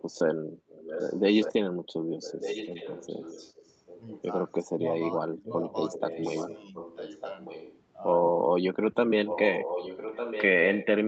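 Echo leak appears at 0.68–1.21 s, 1.4–1.53 s and 2.22–4.23 s. A faint delayed copy of the speech returns about 1.2 s late, roughly 10 to 15 dB below the main talker, most likely because a loudspeaker-side echo canceller let residual pickup through. On a spectrogram it shows as weaker duplicates of earlier harmonic patterns.

Speech suppressed in double talk occurs at 4.66–4.83 s and 5.32–5.48 s. The talker briefly dips by about 20 dB and then about 15 dB, for roughly 150 ms each time, likely because the canceller turned down everything during overlap. The waveform shows short notches in the envelope.

Echo leak returns at 5.91–7.8 s, 9.25–10.44 s and 10.64–10.86 s. The last burst is loudest at about 5 dB under the speech. The spectrogram shows the same 1.2 s-shifted ghost traces, all within the 8 kHz ceiling of the Opus call path.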